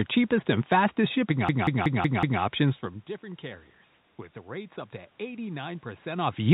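From 1.49 s to 2.42 s the speech stutters like a machine gun: one slice of about 186 ms plays five times in a row, hammering at roughly 5.4 Hz. This is a system hang loop. The computer or audio driver froze, and the sound hardware kept replaying the same ring buffer. A loop of that length fits an 8192-sample buffer. Little or no audio goes missing around the stall, and the call-band limit at 4 kHz stays the same throughout.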